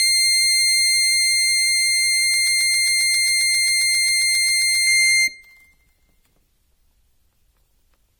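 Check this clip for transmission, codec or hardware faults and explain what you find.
Two faults are audible in this music clip: one runs the whole length and one is a short stretch.

Generation loss runs throughout. The audio was likely decoded and re-encoded around five times, which fits a 64 kbit/s AAC chain. Each pass requantises on a shifted frame grid, so the music sounds swirly and hollow, attacks are smeared, and nothing is present above 19.2 kHz.

A broken-record loop runs from 2.34 to 4.87 s. A 0.13 s fragment repeats exactly, back to back, 19 times. The likely cause is a stall in the player or stream that kept resending its last held fragment, so the music that should have played there is lost.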